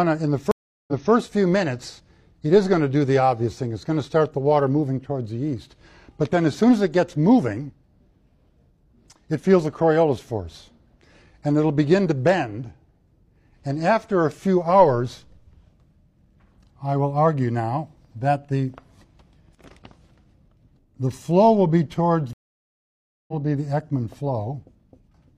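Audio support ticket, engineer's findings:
Stream reconnect, 0.51–1.11 s: 0.36 s dropout, then audio resumes 0.23 s earlier than where it cut, repeating material. Network/streaming client: connection lost, player reconnected, fresh decoder started mid-stream, server resent a buffered burst.

Stream reconnect, 22.33–23.34 s: 0.95 s silence, playback resumes about 0.7 s later, material skipped. Same component: link dropped, reconnect joined the live stream further on with a new decoder instance.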